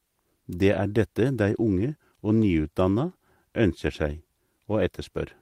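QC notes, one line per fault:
1.77–1.79 s, lost packet rebuilt from error correction: a brief 20 ms patch of speech sounds rougher and noisier, with no gap, which fits a single lost packet. The decoder played the low-bitrate copy carried in the next packet, so continuity holds but detail thins.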